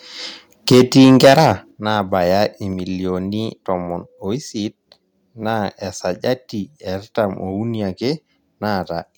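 From 0.71 to 1.52 s the speech has a harsh, crackling edge from microphone overload, with peaks about 9 dB past the converter's limit and roughly a tenth of samples flattened, likely from input volume set too high. Unlike a codec artefact, the grit tracks the loudest syllables. A microphone volume step-down at 0.72 s (about 2 dB), 1.71 s (about 7 dB) and 2.73 s (about 2 dB) shows as abrupt level drops of voice and background together, likely the call software lowering input volume, not a fade.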